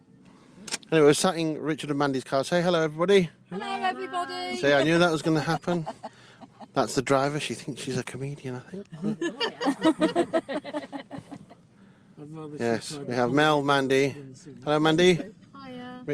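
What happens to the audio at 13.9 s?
Nothing goes wrong at 13.9 s; the audio plays through that moment intact, with no dropout, click or distortion.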